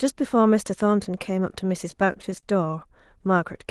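From 1.91 to 2.93 s, repeated stalls (stutter): the jitter buffer ran dry eight times, each gap up to 28 ms bridged by stretching prior sound, so speech drags haltingly.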